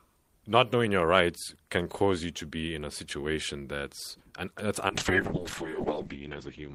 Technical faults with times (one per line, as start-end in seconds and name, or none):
4.89-6.74 call bitrate drop